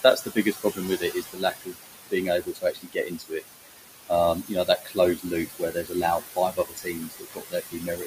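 Noise suppressor artifacts run through the whole recording. The suppressor pulls the room noise down by about 19 dB between phrases, so the background pumps.

Speech cut by the noise suppressor comes next, from 0.02 to 3.45 s. The suppressor mistakes quiet speech for noise and dips it by up to about 21 dB, for roughly two seconds in total. It cuts again from 4.35 to 4.99 s by up to about 16 dB, and from 5.17 to 6.04 s by up to about 17 dB. From 6.2 s to the end, it drops up to about 20 dB, for around a second and a half. Soft sounds and word endings turn faint or swallowed, while the room noise sits about 7 dB under the speech.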